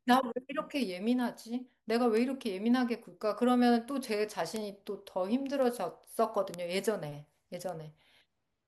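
Speech with five bit error spikes, sharp broadband ticks at 2.17, 4.56, 5.62, 6.54 and 7.69 s, each a single sample peaking around -11 to -23 dBFS. A flipped bit makes the sample jump by a power of two and snap back, unrelated to the speech.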